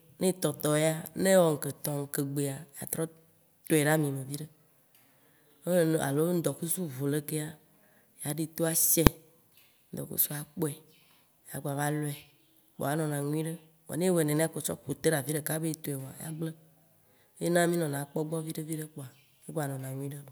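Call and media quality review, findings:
Invalid numbers at full scale, 9.07 s. Single loud bang in the speech, no gap audible around it. Probable component: DSP stage upstream of output. A calculation produced infinite or invalid values, clamped to the largest positive or negative sample, so output pinned at one extreme value, far beyond the speech peaks, for about 1.45 ms, which fits a 64-sample processing block. Block too short to hear separate onset and release pops, hence one bang.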